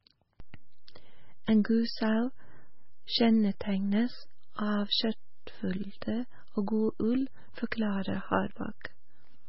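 Throughout, the speech sounds heavily watery and swirly, with smeared attacks and nothing above 5.6 kHz. The likely cause is MP3 compression at a very low bitrate, around 16 kbps. At 0.40 s a single low thump marks a DC step: the waveform's zero line jumps to a new offset and holds there to the end while the speech carries on unchanged.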